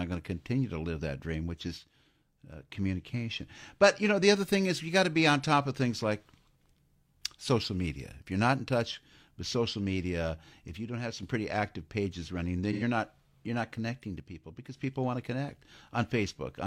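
One channel drops out at 1.78 to 2.70 s, 10.77 to 11.23 s (after "with social media if", before "pretty active pages running") and 14.20 to 14.77 s (after "you're not connecting to", before "people want to connect"): the speech abruptly falls about 6 dB, likely because one stereo channel vanished before the mono sum.

AAC frame loss with concealment at 12.72 to 12.82 s, between "active pages running then" and "not you're not connecting": roughly 85 ms, fitting two lost frames, is filled from the previous spectrum and sounds briefly smeared and noisy.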